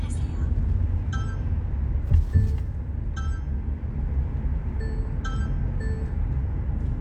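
Nothing in this recording of everyday sounds comes across as a technical fault, so there's nothing to point to in time.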